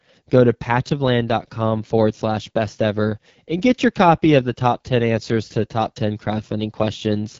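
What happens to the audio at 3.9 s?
AMR wideband (HD Voice) coding is at work at 3.9 s, as it is across the whole clip. The codec models the speech up to 6.4 kHz as pulses driving a vocal tract filter and substitutes shaped noise above that, with nothing above 7.4 kHz. The damage is plainly audible: the speech sounds rough and raspy, and that coarseness points to one of the lowest modes, consistent with about 8.85 kbit/s.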